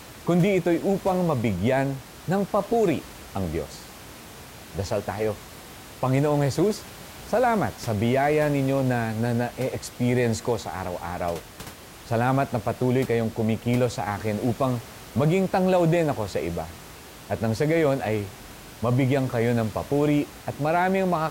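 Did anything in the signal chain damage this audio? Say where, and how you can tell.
No, the signal chain left this speech recording intact, and the only thing under it is the room's own background noise, sitting about 19 dB below the speech, which belongs to the recording rather than to any stage of the system.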